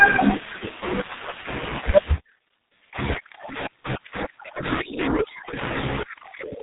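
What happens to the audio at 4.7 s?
The G.723.1 codec affects 4.7 s as it does the whole clip: its long frames and very low bitrate, likely about 6 kbit/s, strip everything above 3.8 kHz, leaving the speech muffled and hoarse with smeared consonants.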